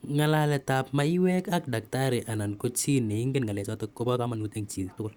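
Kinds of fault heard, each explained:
Time-stretched section: from 3.07 s to the end the speech suddenly runs 1.66 times faster at unchanged pitch, rushed, likely from software squeezing it by dropping short pieces.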